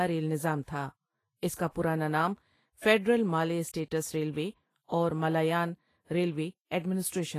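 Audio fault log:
Throughout, Vorbis compression: the speech sounds hissy and grainy, with roughened tones, blurred attacks and nothing above 14.1 kHz. The likely cause is low-quality Vorbis encoding, at a rate that fits about 28 kbps, quantising the treble so coarsely that fine detail turns to noise.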